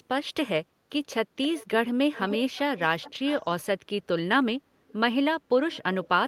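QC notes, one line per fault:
1.42–1.67, 2.14–2.38, 2.55–2.60, 2.77–3.45, 4.88–4.94, 5.72–5.80 and 6.04–6.08 s, echo leak: a faint delayed copy of the speech trails the direct signal by 262 ms, loudest around 2.14 s at about 10 dB down, mostly near 20 to 25 dB down, and barely audible near 4.9 s. The fixed delay and broken-up bursts point to a far-end loudspeaker whose echo canceller likely failed to suppress the return path fully.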